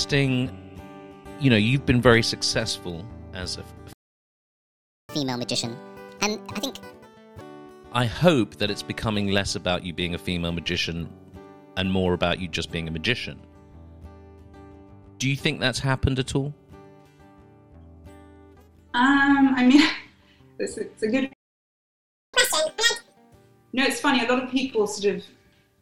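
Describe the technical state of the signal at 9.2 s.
At 9.2 s the signal is intact, with no dropout, distortion, discontinuity or other technical fault audible at that point.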